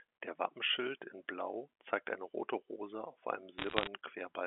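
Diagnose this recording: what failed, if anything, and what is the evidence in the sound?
Bit errors on a digital phone line appear from 3.58 to 3.88 s as a burst of sharp ticks and crackle over the band-limited G.711 speech. The fault is in transmission: flipped bits, around one in a hundred, each corrupt a single mu-law sample, and sign or high-bit hits produce the loudest clicks.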